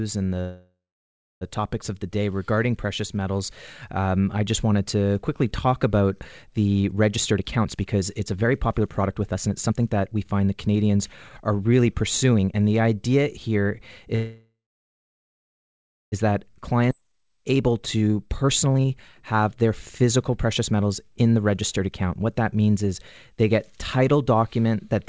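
At 0.40 s there is a call audio freeze lasting until 1.44 s, just before "topics of the day". The audio was most likely held up in transit until the jitter buffer ran dry. The last sound is stretched into a fading buzz, and the final 0.66 s or so is silent. Nothing is lost; the audio resumes where it stopped. On a spectrogram, smeared horizontal bands decay into a blank column, and the waveform shows a shrinking tail followed by a flat line.

From 7.17 s to 12.53 s, right after "quickly talk about the", a jitter buffer speed-up makes the audio run about 19% fast at unchanged pitch, removing roughly a second in total. The receiver was draining excess buffered delay by cutting out pitch-period-sized slices, so the passage sounds hurried. The spectrogram shows harmonics at their normal height, but syllables packed closer together.

A second call audio freeze follows "the idea here", running from 14.16 s to 16.15 s, about 2.0 s. 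The held sound fades into roughly 1.6 s of silence, which appears as a long empty gap in both views.

A second speed-up covers 16.28 s to 22.12 s, at about 14% faster, trimming around 0.7 s. Inside it, at 16.9 s, a skip ahead drops about a second of audio. The two sides are joined almost directly. This shows as an abrupt discontinuity in the waveform and a sudden change in spectral pattern with no gap.

Throughout the clip the spectrum stops at 8 kHz, which fits a wideband call codec such as G.722.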